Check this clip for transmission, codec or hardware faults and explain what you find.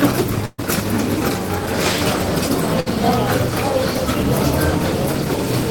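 Two bursts of packet loss break up the audio. From 0.45 to 0.60 s the sound smears into a held, fading tail lasting 127 ms, then jumps ahead with 100 ms of material gone and timing shifted by 27 ms. From 2.80 to 2.88 s a shorter 58 ms fade covers 60 ms of lost audio. Each time, several packets in a row failed to arrive in time, so the receiver stretched the last sound and turned it down until playback resumed.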